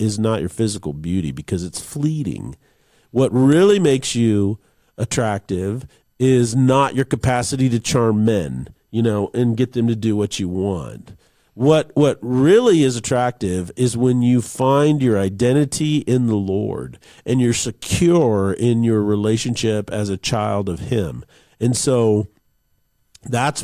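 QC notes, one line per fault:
No faults noted.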